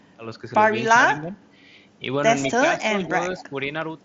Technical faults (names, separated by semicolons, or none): speech suppressed in double talk; echo leak